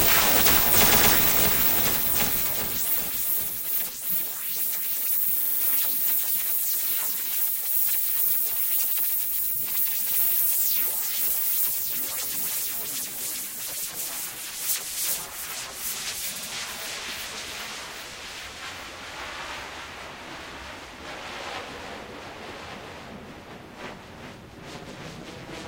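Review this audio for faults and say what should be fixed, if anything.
A doubled audio track runs throughout: a full-band copy about 5 dB quieter trails the original by about a second, dry and uncoloured. It is likely a second capture path mixed in. Remove that extra route or track before mixing.

Repeated frames cause stutters at 0.91 s, 5.41 s and 16.35 s. A 116 ms block plays twice more, then a 46 ms block four more times, then a 70 ms block twice more, adding roughly 0.56 s overall. Check the encoder and transport for duplicated frame writes or resends.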